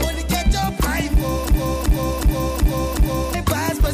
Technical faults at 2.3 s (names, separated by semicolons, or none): system hang loop